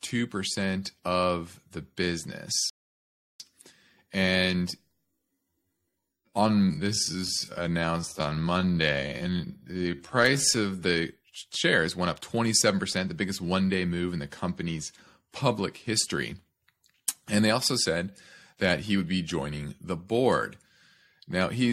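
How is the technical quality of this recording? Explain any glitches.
Two glitches stand out in this speech recording: a playback stall early on, and a stretch where the pace drags.

At 2.70 s there's a rebuffering stall. The player ran dry of downloaded audio, went silent until 3.40 s, then picked up exactly where it left off. Nothing's missing, but about 0.7 s of dead air gets added.

From 4.91 s to 10.81 s you get a time-stretched section, playing at roughly 0.57 times normal speed with the pitch unchanged. That's likely software padding the audio out by repeating tiny slices, which is why it sounds slow and dragging.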